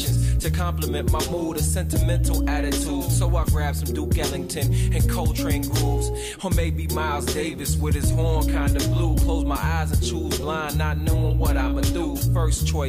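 No technical faults are audible.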